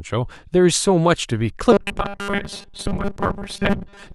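Speech that, from 1.72 s to the end, takes on robotic sound from repeated short buffers: a rigid 200 Hz metallic buzz, likely from a 5 ms block being replayed, with most of the audio repeated rather than new. A spectrogram shows evenly spaced 200 Hz harmonic stripes, and the waveform shows identical 5 ms cycles.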